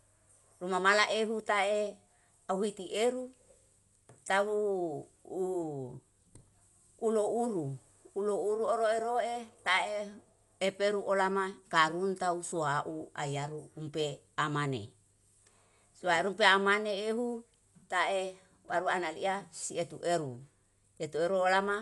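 Speech, with plainly audible codec damage throughout: dull, nothing above 11.4 kHz, and a rough, fluttering noise around tonal parts. This is likely Dolby Digital compression at a low bitrate, which fits 64 kbps.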